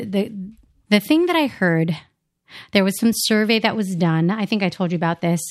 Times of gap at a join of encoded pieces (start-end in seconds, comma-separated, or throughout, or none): none